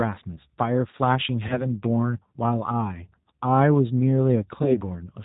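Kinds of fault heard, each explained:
G.729 codec: A low-rate speech coder that models each 10 ms frame with a vocal tract filter, a pitch predictor and a handful of pulses, discarding everything above 4 kHz. The damage is plainly audible throughout: the speech is muffled and band-limited, with a rough, slightly synthetic texture that fits the 8 kbit/s G.729A variant.
VoIP packet loss concealed by the speech codec: When a packet fails to arrive, the decoder extrapolates from its last pitch and filter state and reduces the gain frame by frame. Here there are two such events, at 1.48 to 1.69 s and 4.63 to 4.82 s. Each points to a single lost packet covering 20 ms, yet the smeared and weakened sound lasts about 200 ms while the decoder state recovers.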